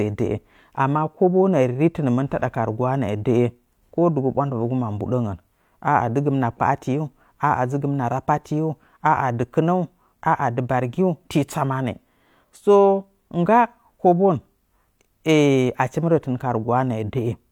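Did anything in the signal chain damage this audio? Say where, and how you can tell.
No, nothing in the signal chain has left audible damage on this speech. There is no stage to point to, because no event anywhere in the recording stands out as a fault.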